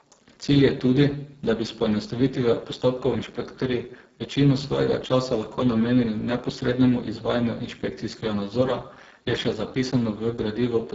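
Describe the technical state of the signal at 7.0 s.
At 7.0 s the speech carries heavy Speex codec damage, present throughout the clip: at a low setting around 5.8 kbps, the CELP excitation is starved of bits, leaving a hoarse, noisy quality, with nothing above 7.7 kHz.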